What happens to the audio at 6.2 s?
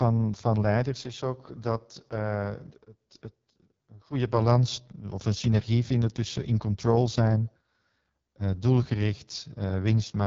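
At 6.2 s, as throughout, the speech carries heavy AMR wideband (HD Voice) codec damage. It sounds rough and raspy, which fits the lowest 6.6 kbit/s mode, with nothing above 7.3 kHz.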